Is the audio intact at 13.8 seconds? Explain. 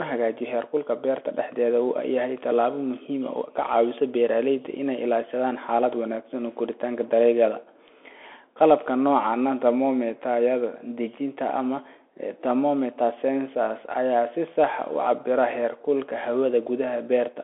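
No. At 13.8 s the speech is still passing through a Bluetooth CVSD headset codec, which affects the whole clip. Each sample is coded as a single up-or-down step whose size adapts, here at a rate that fits a 64 kbit/s stream. The sound is confined to roughly 300 Hz to 3.4 kHz, with nothing above 3.8 kHz. Unlike a clean telephone band-limit, it adds a granular hiss, scratchy s sounds and distortion where fast, loud high content outruns the step.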